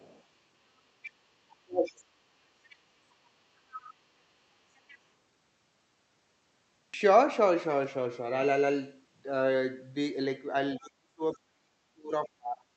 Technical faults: other side's voice leaking through; speech suppressed in double talk

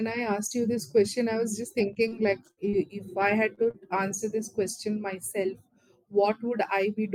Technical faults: repeated packet loss (robotic sound); short concealed packet loss; lost packet rebuilt from error correction

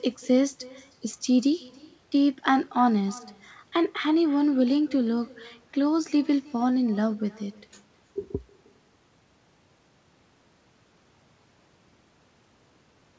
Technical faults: echo with no canceller

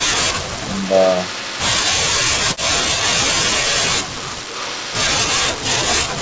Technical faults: speech suppressed in double talk; echo leak

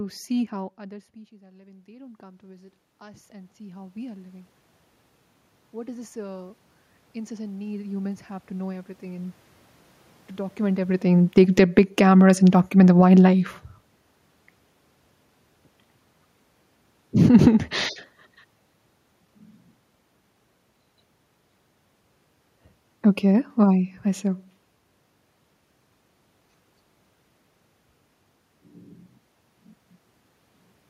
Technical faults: automatic gain rising; automatic gain falling

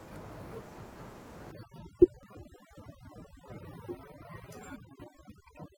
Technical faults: overdone noise removal; overlap between stream segments

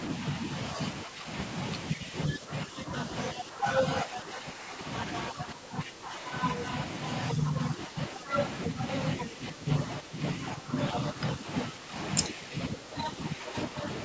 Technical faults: speech suppressed in double talk

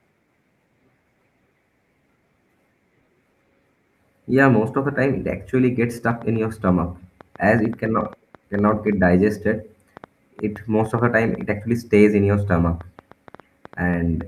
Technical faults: train of clicks

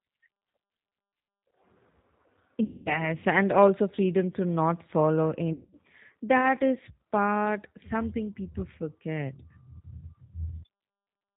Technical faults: G.729 codec; VoIP packet loss concealed by the speech codec

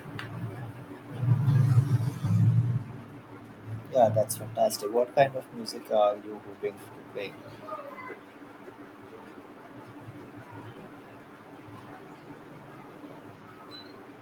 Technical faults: jitter buffer speed-up

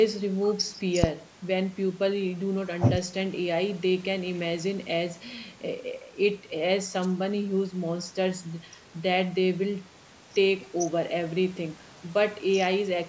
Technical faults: phantom power thump

